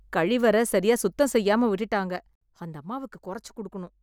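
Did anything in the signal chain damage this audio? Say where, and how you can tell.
Yes, zipper noise from about 1.60 to 2.65 s, just after "சரியா சுத்தம்": a roughly 10 dB drop applied in unsmoothed steps, around 40 per second, ticking audibly.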